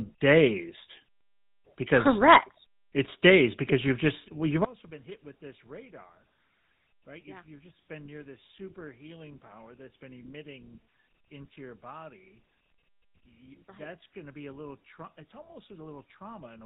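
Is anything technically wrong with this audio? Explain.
Yes, there are two faults.

Throughout the clip, the speech has a buzzy, gravelly roughness and nothing above 4 kHz, the plainly audible damage of the GSM full-rate codec. This codec models the vocal tract and drives it with an excitation of regularly spaced pulses, keeping only every third sample. That coarse pulse train causes the grainy buzz, and the hard 4 kHz ceiling dulls consonants. The amount of damage fits the codec's 13 kbps rate.

From about 4.65 s, just after "you've just well you've", to the end, the voice suddenly drops by about 23 dB and what remains is a faint copy. The likely cause is one channel inverted: one stereo channel has reversed polarity, so when the two are summed to mono, the centred voice cancels almost entirely and only the small difference between the channels is left.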